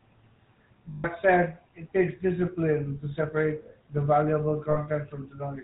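A speech recording runs through the GSM full-rate codec for its whole length, giving the buzzy, gravelly roughness of pulse-driven vocal-tract modelling with nothing above 4 kHz, which fits the 13 kbps full-rate coder. Unlike plain band-limiting, the damage is a grainy texture in the voice itself. Lost GSM frames interrupt it twice: from 0.90 to 1.05 s, about 140 ms just before "said it takes discipline", and from 4.70 to 4.77 s, about 60 ms right after "to separate the valuable". Each gap holds a rough, metallic ring rather than dropping to silence or repeating a clean chunk.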